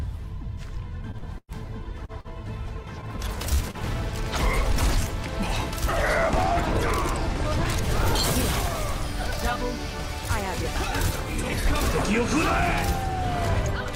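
Repeated packet loss (robotic sound) runs from 1.11 to 2.28 s in this audio: six gaps were patched by extending the preceding sound, about 248 ms in total, while 120 ms is missing outright, the longest gap reaching 104 ms. Two short stalls from a late packet follow, at 3.55 to 3.62 s and 3.71 to 3.77 s, where the jitter buffer ran dry and the last sound was held for 44 ms and then 30 ms before playback resumed with nothing lost.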